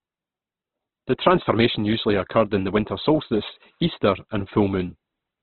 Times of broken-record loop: none

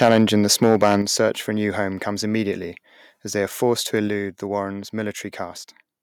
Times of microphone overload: 0.02-0.35, 0.63-0.96

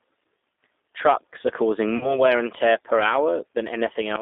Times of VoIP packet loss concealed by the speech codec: 1.97-2.22

